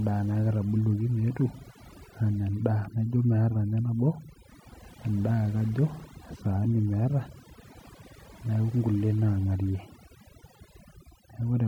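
Speech with overdone noise removal running throughout: aggressive suppression drops individual frequency bands near the noise floor, leaving a lowered background broken into twinkling specks. A spectrogram shows scattered isolated bins between words and ragged, gappy speech harmonics.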